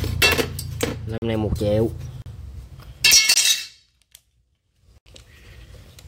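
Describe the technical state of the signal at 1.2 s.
At 1.2 s there is a block of digital silence from 1.18 to 1.22 s, a 40 ms hole where the audio drops out. The audio stops and restarts with no fade. That hard, abrupt cut sets it apart from a fading dropout.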